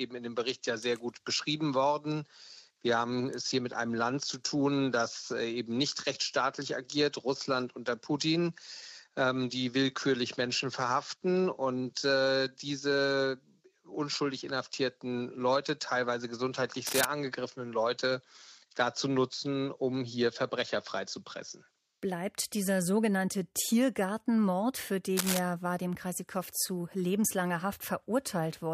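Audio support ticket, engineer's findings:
Cable scratch noise, likely a worn cable or connector shifting, contact resistance jumping rapidly. Two brief bursts of dense, uneven scratching, roughly as loud as the programme: 16.87–17.05 s and 25.17–25.39 s. Check and reseat or replace the lead.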